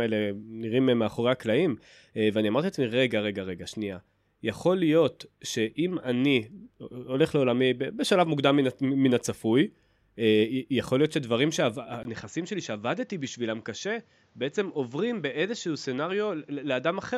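A speech recording that, at 12.03 s, takes on a narrower, duller tone through to the end, consistent with the input switched to a poorer device, likely a different microphone or headset. A 20 ms dropout marks the switch. From there the level falls by roughly 5 dB and a faint new background noise appears. On a spectrogram, energy abruptly stops at 7.6 kHz after the gap. On the waveform, the amplitude shrinks and the floor between phrases rises.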